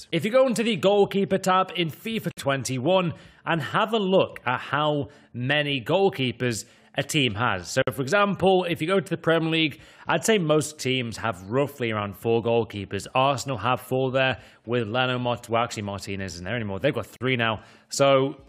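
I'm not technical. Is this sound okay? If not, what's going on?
No, there are three brief dropouts, at 2.31, 7.82 and 17.16 seconds, each around 44 to 56 milliseconds. That's a gap at a join of encoded pieces: sections saved separately got stitched together with their built-in silent padding left in.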